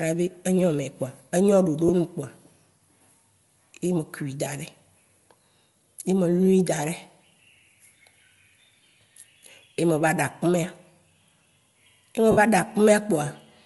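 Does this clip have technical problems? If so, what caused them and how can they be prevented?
Yes. Throughout the speech there is a breathy, grainy edge on the upper frequencies, with noisy fill where fine detail should be. This is likely Bluetooth LC3 compression, whose short transform frames at a modest bitrate (around 48 kbps) strip and noise-fill the top band. A higher LC3 bitrate, or a wired connection, would prevent it.

Lost LE Audio frames cause short, noisy smears at 1.88–1.90 s and at 4.45 s. A longer one at 12.31–12.38 s blurs and starts to fade. The decoder repeated the last spectrum with scrambled phase to cover the missing audio. A stronger, less congested Bluetooth link would prevent these dropouts.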